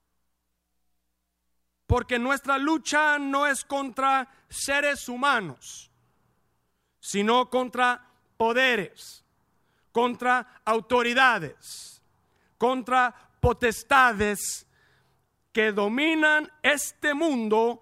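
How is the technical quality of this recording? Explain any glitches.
Good news: there are no glitches to explain, since nothing in this speech recording stands out as a technical fault.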